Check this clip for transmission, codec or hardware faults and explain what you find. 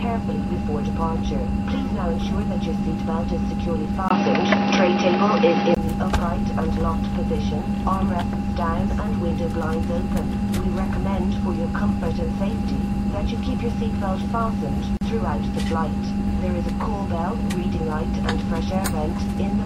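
Two faults stand out. From 4.08 s to 5.77 s the sound goes dull and boxy, with nothing above 5.8 kHz, a level shift of around 5 dB, and a new, faint background noise well below the signal. A silence of about 20 ms marks the switch. This is likely an input switched to a poorer device, with the recording moving mid-stream onto a narrower-band microphone or headset path that has its own tone, gain and noise.

From 14.97 s to 15.01 s a 42 ms hole opens in otherwise continuous sound, with smeared edges, and the sound resumes exactly where it broke off. This is a gap at a join of encoded pieces. Separately encoded segments were spliced without removing the encoder's start-up delay and end-of-stream padding, so that leftover silence sits at the seam.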